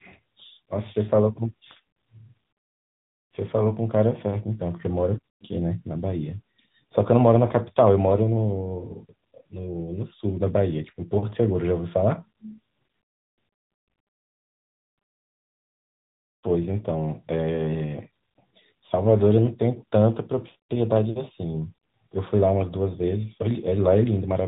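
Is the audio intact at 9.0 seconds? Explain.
No. At 9.0 s, as throughout, the audio shows tandem speech coding: the call passed through several speech codecs in a row, decoded and re-encoded at each hand-off, so every coder worked on the previous one's damage. The sound points to a chain like G.726, then G.711 mu-law, then AMR-NB at about 10.2 kbit/s. The speech is rough, muffled and warbly, with nothing above 3.8 kHz.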